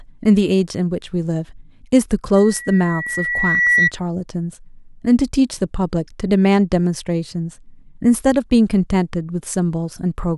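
From 2.36 s to 3.92 s a single pure tone near 1.9 kHz rises out of the speech, swelling over roughly a second and a half into a piercing squeal that ends up a few decibels louder than the voice. This is loudspeaker feedback squeal: the microphone was hearing the loudspeaker it drives, and at 1.9 kHz the loop gain went above one, so that tone kept feeding itself until the loop was broken.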